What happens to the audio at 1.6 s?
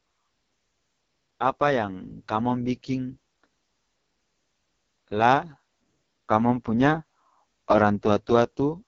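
At 1.6 s the speech carries AMR wideband (HD Voice) codec damage, present throughout the clip. It sounds rough and raspy, which fits the lowest 6.6 kbit/s mode. A coarse pulse-driven vocal tract model rebuilds the voice. Above 6.4 kHz only shaped noise remains, and nothing is heard above 6.9 kHz.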